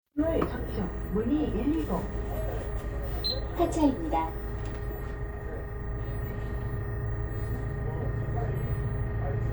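A recording of everyday sounds, with nothing technically wrong to point to at any time.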